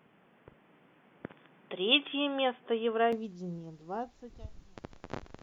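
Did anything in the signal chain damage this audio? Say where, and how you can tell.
Yes. The input appears to have been switched to a poorer device at the driver or device-selection stage, likely a headset's call profile or a second microphone. From 0.0 to 3.13 s the speech has nothing above 3.5 kHz, so it sounds dull and boxy. It sits roughly 5 dB quieter, over a noise floor around 30 dB down. At 3.13 s the fuller band returns instantly, with no gap at the changeover.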